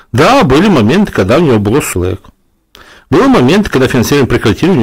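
Hard clipping runs through the whole speech clip. The signal is driven about 14 dB past what the chain can pass, so roughly a fifth of the samples are cut flat at the ceiling. Those squared-off peaks add high harmonics, giving a harsh fuzz on every loud syllable.

Damaged data in a compressed stream appears at 1.93 s. Corrupted bytes leave the decoder unable to read the frame there. It loses sync and hunts for the next valid header, producing a brief glitch.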